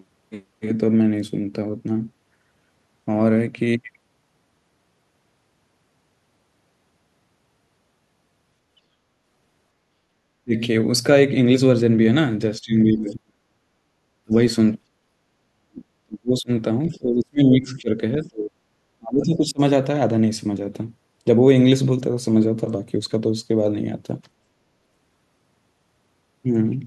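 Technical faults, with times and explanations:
10.44 to 19.6 s, speech suppressed in double talk: the speech drops away at 10.44–10.54, 12.6–13.63, 14.24–14.33, 15.39–16.51, 16.88–17.98, 18.18–18.57 and 18.98–19.6 s, some dips brief and others lasting about a second, sinking by roughly 25 to 40 dB. The likely cause is an echo canceller failing to separate the near talker from far-end echo during overlapping talk and turning the near talker down. Unlike packet loss, the level ducks in step with the other side's talking rather than gapping abruptly.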